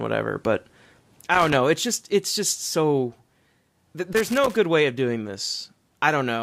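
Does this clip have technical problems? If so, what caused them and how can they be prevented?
Yes. There are two bursts of loose connector crackle in this speech: one from 1.34 to 1.55 s, and a longer one from 4.13 to 4.57 s, ending just before "way of doing". Both are irregular scratchy crackles. A worn or dirty contact keeps making and breaking as the cable or plug moves, which chops the signal, and any DC sitting on the line turns each break into a pop. To prevent it, clean or replace the suspect connector and secure the cable so it can't shift while recording.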